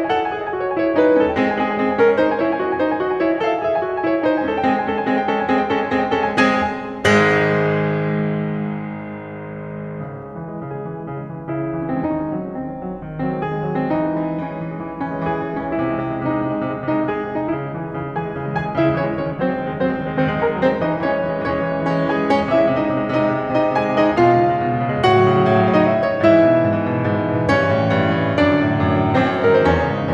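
A music clip with no technical faults to report.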